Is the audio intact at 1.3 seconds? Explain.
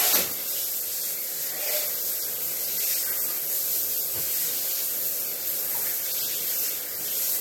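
No. At 1.3 seconds, as throughout the clip, the sound has likely been through low-bitrate AAC compression, consistent with about 32 kbps, which discards spectral detail and leaves nothing above 18 kHz. The damage is plainly audible as dull, smeared sound with a warbling, fizzy texture.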